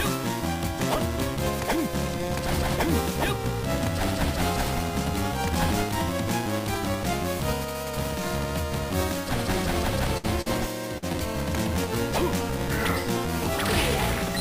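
At 10.17 to 10.25 s there is a burst of packet loss: about 60 ms of audio never arrived in time, and the receiver filled the hole by extending the last sound it had while fading it down. It comes across as a held buzz or hiss that sags, after which the audio picks up further along with 60 ms skipped. On a spectrogram the last good frame's spectrum is stretched sideways and dims; the waveform envelope decays, then jumps.

Three short concealed packet losses follow, at 10.41 to 10.48 s, 10.98 to 11.04 s and 11.12 to 11.16 s, losing about 40, 40 and 20 ms. Each gap was patched with a continuation of the preceding sound before blending back in, so each is heard as a quick smear or wobble. A spectrogram shows brief blurred patches with soft edges. In the waveform they appear as short stretches that are too regular.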